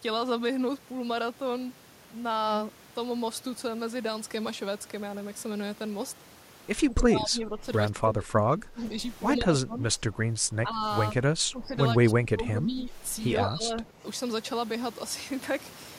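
The talker's speech dips by about 10 to 25 dB at 6.81, 7.9, 9.36, 11.13, 11.99 and 13.36 s, each dip lasting under two seconds. This is likely speech suppressed in double talk, with the echo canceller turning down the talker along with the loudspeaker echo.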